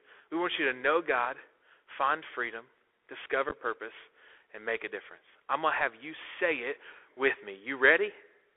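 From start to end the speech is boxed into a narrow telephone band, about 300 Hz to 3.4 kHz, with plainly audible codec damage: a granular hiss, scratchy s sounds and distorted loud highs. This is the Bluetooth CVSD headset codec, whose one-bit up-or-down coding, consistent with a 64 kbps link, cannot track fast changes.

At 3.49 to 3.53 s, just before "purpose and make a", the speech breaks into short, abrupt holes. About 22.5 ms is missing across 30 ms, the longest gap 11.2 ms. This is unconcealed Bluetooth headset packet loss: a handful of voice packets never arrived and went unfilled.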